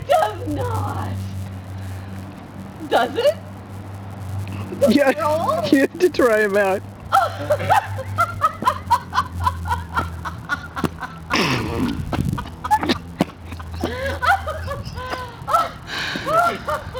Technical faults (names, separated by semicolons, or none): filter restarted on every block